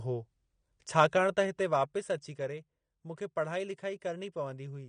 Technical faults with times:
0.00-4.88 AAC compression

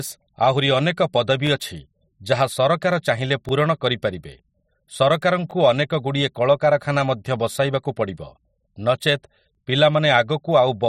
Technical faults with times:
1.47-1.49 overlapping chunks
3.49-3.51 overlapping chunks
5.51-5.53 overlapping chunks
7.53 overlapping chunks
9.55 overlapping chunks

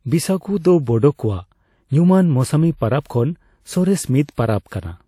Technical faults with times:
4.68-4.71 pre-echo

